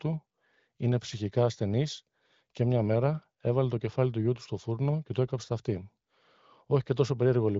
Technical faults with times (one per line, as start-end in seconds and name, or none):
none